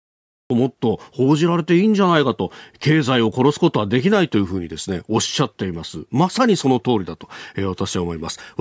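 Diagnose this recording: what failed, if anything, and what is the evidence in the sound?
Cut-off start at the capture stage: digital silence until 0.50 s, then speech jumps in mid-sound with no natural attack, because recording began late.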